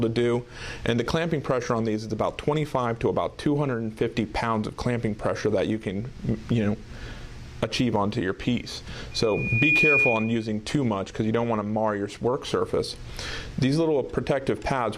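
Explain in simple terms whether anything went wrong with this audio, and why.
A microphone was picking up the sound of the very loudspeaker it was feeding, so the sound went round and round in a loop and got louder each time. That loudspeaker feedback squeal starts at 9.11 seconds: a single high, piercing tone near 2.4 kHz swells up over about half a second, sits clearly above the rest of the audio, and then stops at 10.51 seconds.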